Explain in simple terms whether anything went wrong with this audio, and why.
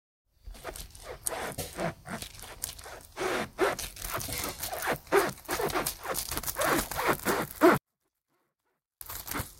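Something did go wrong: from 7.78 to 9.01 s the sound suddenly drops to a near-whisper, then comes back. That's a 24-bit alignment error (too quiet). The audio was packed into the bottom part of a bigger slot but read as if it filled the whole slot, so everything came out drastically shrunk while staying clean.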